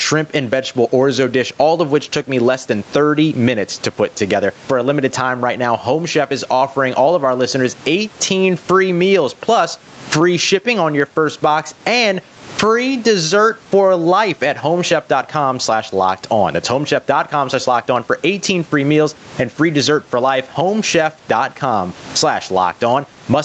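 Right through the speech there's gain pumping: the level keeps lurching up and down, swinging something like 15 dB, so the delivery sounds squashed and loud and soft stretches sit unnaturally close together. The likely cause is input gain set far too hot for the mic, with a fast limiter or compressor clamping down on every loud moment. The room noise stays well underneath, around 36 dB below the speech, and the top end stops at 8 kHz, which fits a 32 kbps Opus call.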